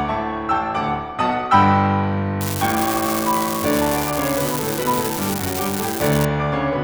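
From 2.41 to 6.25 s, an unreliable data bit flips at random, adding equal spikes of about −8 dBFS that crackle and fizz over the music, even through pauses.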